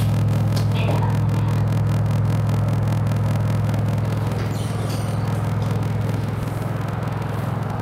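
Everyday sounds with a block size mismatch (padded) throughout: zero gaps buzz at 41.7 Hz, playback runs at 0.889 speed with timbre intact, which fits 1024-sample blocks padded out.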